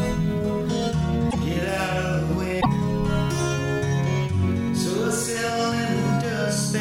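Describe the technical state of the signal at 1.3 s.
From 1.29 to 1.35 s the audio jumps ahead with a brief garbled glitch, likely a broken MP3 bit reservoir, where frames after a cut borrow bytes from the wrong frame, spanning about two 26 ms frames.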